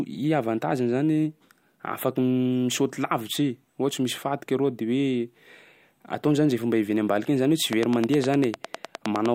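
Something in the chain, likely electrical interference from nearby equipment or a faulty connection or power supply, starts injecting pulses into the speech at 7.73 s and keeps going until 9.27 s. The result is a train of clicks arriving at a steady 9.8 per second, around fifteen of them, each much alike in shape and standing out well above the speech, peaking roughly 15 dB over it. They come through as even, rapid ticking laid over both the speech and the gaps between phrases.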